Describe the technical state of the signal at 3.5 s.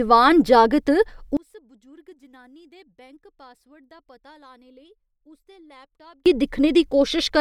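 At 3.5 s the speech has collapsed to a faint residue, about 32 dB down, from 1.37 to 6.26 s. One channel inverted is the likely cause: the polarity-flipped side cancels the shared centre content in mono. Unlike a dropout, a faint ghost remains rather than silence.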